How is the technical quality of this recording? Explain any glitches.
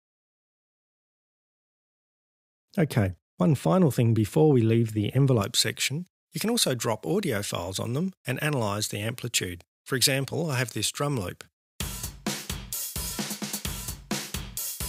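The technical quality drops partway through. From 5.41 s to the end, the recording has pre-emphasis left on. A treble boost applied for recording or transmission, which fits the J.17 curve, was never undone by the matching de-emphasis on playback. Highs sit about 11 dB above 1 kHz at 10 kHz, so the sound turns thin, bright and hissy-sibilant. Unlike a high-pass filter, the low end keeps its weight. The balance tilts upward instead of losing bass.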